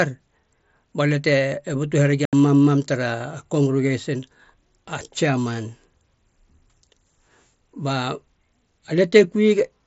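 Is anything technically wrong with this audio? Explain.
Yes. From 2.25 to 2.33 s, unconcealed Bluetooth headset packet loss drops about 75 ms of speech, which fits about ten lost frames. The gap is filled with silence or an idle pattern instead of being concealed, leaving an abrupt hole that can click. The wideband mSBC link carries speech up to 8 kHz around it.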